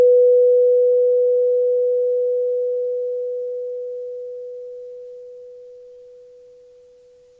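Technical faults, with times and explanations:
0.92–3.97 s, repeated stalls (stutter): the music catches and restarts in a rapid series of about 65 short holds, the longest about 24 ms. In each one the receiver ran out of buffered audio and stretched the last sound until more arrived. Nothing is lost, but about 0.7 s of filler, roughly a quarter of this stretch, makes the passage drag and judder. The band-limited sound, with nothing above 8 kHz, fits the G.722 call path at 64 kbps.
3.79–5.98 s, jitter buffer slow-down: the music plays at about 91% speed with unchanged pitch, adding about 197 ms over the span. The buffer was building back its reserve by repeating single pitch periods and fragments of quieter moments many times over, so sustained sounds are drawn out.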